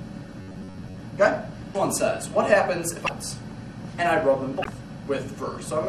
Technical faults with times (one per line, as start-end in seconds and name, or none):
0.00-5.89 MP3 compression
0.41-1.00 robotic sound from repeated short buffers
1.71-1.76 damaged data in a compressed stream
3.05-3.09 damaged data in a compressed stream
4.61-4.67 damaged data in a compressed stream